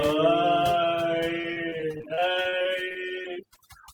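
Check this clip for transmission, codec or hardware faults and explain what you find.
Two faults here: heavy-handed noise reduction across the whole clip, plus a burst of dropouts from about 1.4 s onward.

The overdone noise removal runs from start to finish. The denoiser was pushed too hard, so any frequency band that sits close to its noise estimate gets slammed down or switched off, and the quieter parts of the voice go with it. You hear a background that drops away and breaks up into little twinkly specks.

Then from about 1.41 s to 3.58 s there's repeated packet loss, the robotic-sounding kind. Packets kept going missing or arriving late, and each hole got papered over by stretching the last bit of sound forward, only for the next gap to arrive moments later. There are around twenty short holes, the longest about 35 ms, and roughly a sixth of that stretch is patched audio. The result is choppy, with pieces of the speech missing.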